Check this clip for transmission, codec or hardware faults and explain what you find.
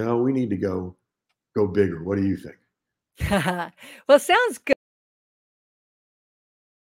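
One fault is present: an audio dropout to silence starting at 4.73 s, just after "well sounds", and running to the end of the clip at 6.87 s. The speech stops abruptly mid-flow and the last 2.1 s are silent, with no room tone or noise floor underneath. The likely cause is lost input, such as a disconnected device, failed link or accidental mute, while recording continued writing silence. Anything spoken in that span is gone.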